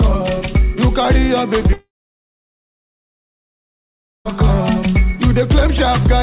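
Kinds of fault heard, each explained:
Long network dropout: From 1.73 s to 4.28 s no new audio arrives. The last sound is stretched into a brief fading buzz, then about 2.4 s of silence follows. Audio resumes with that stretch gone. A likely network interruption on the call.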